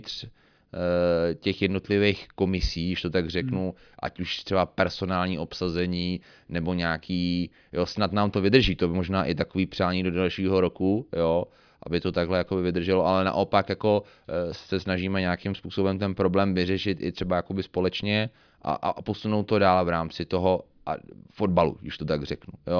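No technical faults can be heard in this speech recording.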